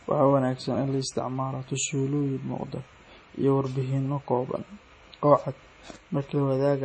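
Throughout the speech, the sound is watery and swirly with chirpy, metallic s sounds and smeared attacks, likely from heavy MP3 compression at a very low bitrate, around 32 kbps. A spectrogram shows a hard ceiling near 9.5 kHz and speckled, flickering high bands.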